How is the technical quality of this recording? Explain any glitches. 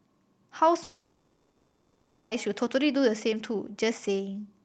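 The quality is hurt by one real glitch, a gap in the middle of the speech, heard through a call codec whose top end stops around 8 kHz.

From 0.83 to 2.34 s there's what sounds like a long network dropout, most likely lost packets. About 1.5 s of audio never arrives, so the receiver stretches the last sound into a fading buzz, then about 0.3 s of near silence before the speech picks up again, minus the lost part.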